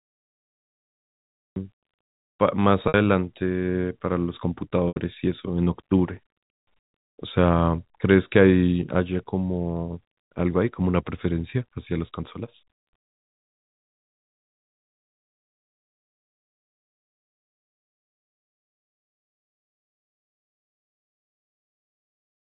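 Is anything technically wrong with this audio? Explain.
Yes, there are two problems here. First, a cut-off start: the clip sits in digital silence until 1.56 s, then the speech jumps in mid-sound with no natural attack or fade-in. That's what you get when the recording or stream begins late and catches the talker partway through, so the first thing you hear is already in progress, and the sudden jump out of silence can carry a click.

Second, there's packet loss with pitch repetition at three points: 2.88 s, where about 60 ms goes missing; 4.88 s, a longer gap of about 80 ms; and 11.5 s, just a 20 ms dropout. Each time, the receiver patched the hole by repeating the last pitch period of the speech and fading it out. The 20 ms one just sounds like a slightly held, buzzy moment. The two longer ones have that buzzy hold dying away into a brief silence before the speech cross-fades back in. 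The gap lengths fit losses in 20 ms packet steps.

The whole thing comes through the G.711 telephone path, so it's band-limited to below 4 kHz, with faint level-following quantisation noise underneath.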